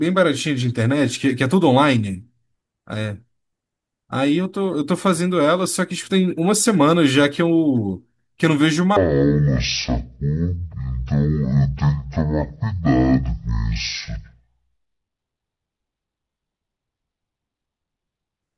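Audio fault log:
8.97–18.43 s: wrong sample rate. The speech abruptly drops an octave and runs at half speed, which fits 48 kHz material played back at 24 kHz. On a spectrogram, harmonics and formants compress toward half their height, and waveform features stretch to twice their length.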